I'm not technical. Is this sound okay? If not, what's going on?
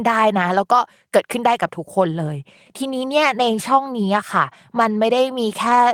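Yes, this sound is okay; nothing is going wrong with it.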